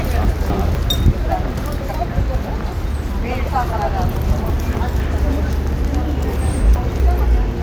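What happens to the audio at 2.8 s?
Nothing goes wrong at 2.8 s; the sound there plays through intact, with no dropout, click or distortion at that point.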